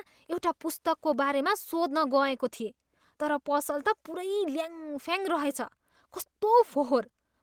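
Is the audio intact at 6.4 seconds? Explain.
No. At 6.4 seconds the speech sits inside a run of repeated timing corrections that lasts from 0.24 to 7.34 s. The receiver trims short slivers of audio to keep pace, which plays the stretch at an effective 105 percent speed. Each cut is tiny, so it comes through as a faint hiccup or a slightly uneven tempo rather than a gap. Unlike packet loss, there is no silence or smeared concealment, and the cuts all shorten the audio and never repeat it.

Behind those corrections is clock drift between sender and receiver, present across the whole clip. The sender's clock runs about five percent fast, so its audio arrives quicker than the receiver plays it out. The jitter buffer keeps overfilling and has to be trimmed again and again. That is why the hiccups recur at irregular intervals. A plain resampling speed-up would instead sound smooth and higher in pitch throughout.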